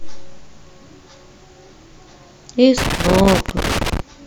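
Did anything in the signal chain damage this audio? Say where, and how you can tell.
Yes. Loose connector crackle from the analogue wiring runs from 2.78 to 4.00 s. The speech breaks into irregular bursts of scratching. A worn or dirty contact keeps opening and closing as it shifts, chopping the signal, and any DC on the line pops.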